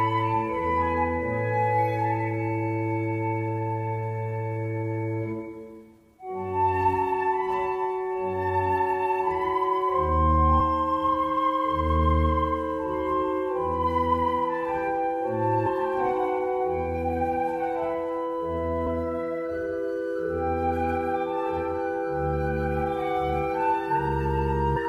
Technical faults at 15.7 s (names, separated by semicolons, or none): damaged data in a compressed stream